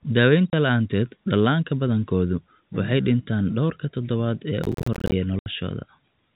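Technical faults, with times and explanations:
0.50–0.53 s and 5.39–5.46 s, packet loss filled with silence: the receiver lost audio packets and played silence in their place, leaving 30 ms and 70 ms holes with hard edges; the first lands just before "la'aanteed dhallaanka badankoodu waxay", and both fit 10 ms packets.
4.64–5.12 s, processor overload crackle: the processor missed its deadline on a few dozen buffers of around 10 ms, and each miss left a short silent gap with abrupt edges. In a row, these gaps sound like gritty crackle over the speech for about half a second, ending when the load eased.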